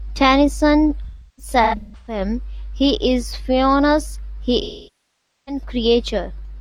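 Speech, hit twice by AAC frame loss with concealment: the decoder stopped receiving frames and patched the gaps from the last good spectrum. From 1.04 to 2.21 s, about 0.68 s of audio is missing in scattered runs, the longest around a third of a second, heard as smeared, noisy, phasey stretches. From 4.62 to 5.62 s, about 0.85 s of audio is lost and filled in by concealment.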